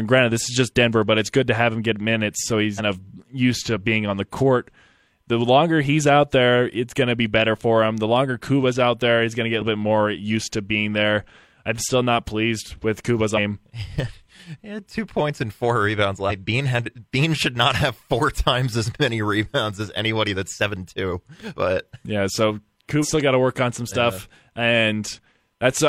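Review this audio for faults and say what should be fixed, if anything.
Damaged data in the compressed stream left corrupt frames that the decoder misread before regaining sync, producing brief glitches in the speech at 2.74–2.80, 13.33–13.39, 16.26–16.32 and 22.99–23.05 s. Re-encode or re-fetch from an intact source, and protect future transfers and storage with checksums or error-checked containers so corruption is caught before playback.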